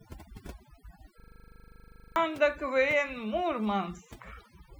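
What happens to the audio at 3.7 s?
At 3.7 s you're hearing overdone noise removal, present across the whole clip: bands near the noise estimate get crushed, leaving twinkly near-silence, with quiet parts of the voice removed along with the noise.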